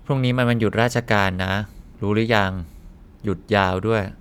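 No technical faults can be heard anywhere in the speech recording, and the signal stays continuous and stable throughout.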